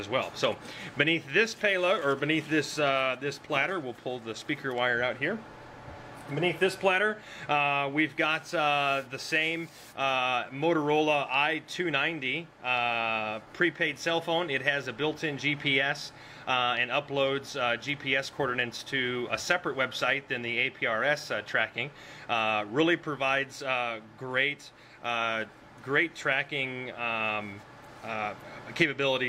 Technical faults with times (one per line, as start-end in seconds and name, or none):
none